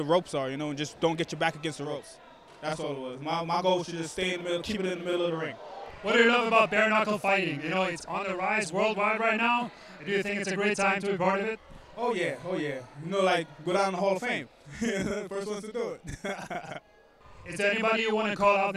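From 1.84 s to the end, a channel delay (doubling) is present: one channel arrives about 42.7 ms late, which fits a 2048-sample buffer, and the mono sum carries both copies at equal level, heard as a distinct slap doubling behind every sound.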